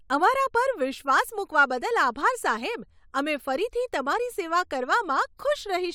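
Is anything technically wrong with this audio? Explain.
No, nothing is technically wrong with this audio. No fault needs explaining or fixing.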